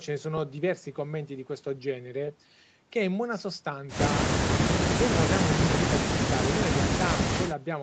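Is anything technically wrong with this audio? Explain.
No, nothing stood out as a technical problem when listening to this speech, which has the limited top end of a call path with nothing above about 8 kHz.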